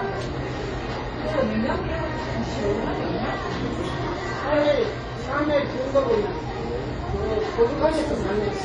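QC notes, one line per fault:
Throughout: transcoding between lossy codecs, likely WMA then HE-AAC at low bitrates; two layers of swirly artefacts, spectrogram hard-cut at 10.3 kHz with blotchy gaps.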